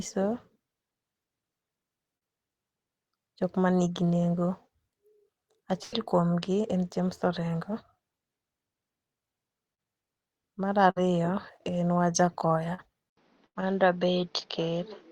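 At 2.17, 9.74 and 12.74 s there is short concealed packet loss. About 40 ms of the call arrived too late each time, so the decoder extended the preceding sound and blended back. Each gap leaves a brief smear or wobble.

The bursts of packet loss at 5.83, 10.90 and 13.46 s last longer, about 100, 60 and 100 ms. Concealment held the last sound for that whole stretch and let it fade. You hear a sustained buzz or decaying hiss, then the audio resumes further along with that portion gone.

At 13.09 s the sound drops out for 80 ms and comes back duller, with nothing above 6.6 kHz and a faint new background noise. The level stays about the same. This is most likely the input switching to a poorer device. Unlike packet loss, the narrower, boxier tone persists to the end.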